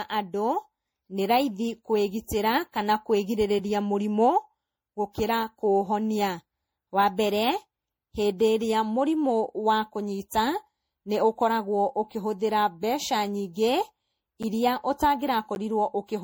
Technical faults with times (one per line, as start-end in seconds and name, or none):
0.00-16.23 generation loss
3.59 block of digital silence
14.43 block of digital silence
15.55 block of digital silence